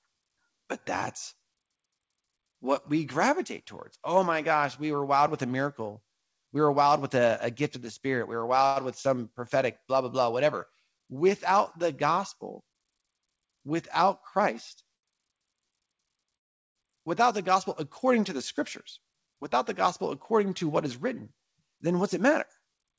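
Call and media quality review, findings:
Short stall from a late packet: 7.80 s, 8.66–8.79 s, 14.96–15.06 s. Last sound held 16, 95 and 72 ms, with a slight buzz or dip. Jitter buffer ran empty and the receiver stretched audio until the packet arrived. Nothing dropped. Unlike the freeze, no silence.

Call audio freeze: 16.37–16.78 s. About 0.4 s gap, nearly all of it (380 ms) silent after a brief fading continuation. Cause likely packets held in transit, draining the jitter buffer. Playback resumes at the same point with no content lost. Much longer than the stalls, and silent rather than held.

Jitter buffer speed-up: 18.59–19.59 s and 20.02–22.96 s. Speech runs at about 107% speed at unchanged pitch and sounds hurried. The buffer trimmed excess delay by cutting short pitch-period pieces, roughly 70 ms and 200 ms removed. Unlike the stalls, time is taken out, not added. Follows the built-up delay. 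G.722 band limit, nothing above 8 kHz, is expected for this path.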